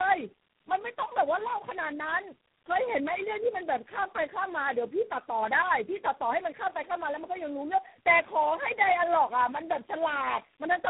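Tandem speech coding runs the whole way through. It sounds like several codecs stacked, probably about four, each recompressing the last one's output. The speech comes out rough, muffled and warbly, with nothing above 3.8 kHz.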